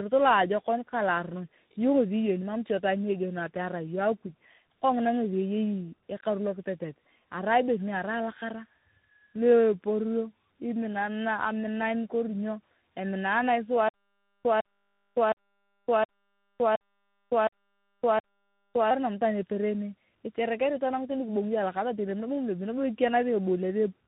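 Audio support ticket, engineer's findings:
Rough, muffled, warbly speech throughout; nothing audible above 3.8 kHz, consistent with narrowband telephone path. Probable component: tandem speech coding across network borders, chain G.729A 8 kbit/s, then G.711 A-law 64 kbit/s, then CVSD 64 kbit/s.

Mechanism: two speech coders in a row. CVSD re-encodes audio already smeared by G.729A's parametric model, compounding its errors; the A-law leg between them passes the signal largely intact. Fix: avoid transcoding.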